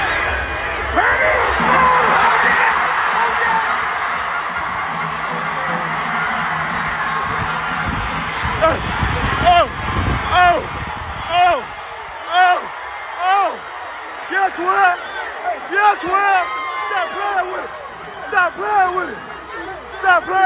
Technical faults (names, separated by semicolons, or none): none